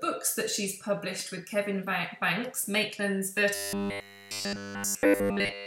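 From 3.55 s to the end at 5.66 s, the audio collapses into a rigid, metallic buzz pitched at 100 Hz, a robotic sound from repeated short buffers that loosely tracks the original sound's shape. The likely cause is audio arriving too rarely, so playback loops the most recent chunk in place of fresh material; the 100 Hz buzz fits a buffer of about 10 ms being repeated throughout essentially the whole passage.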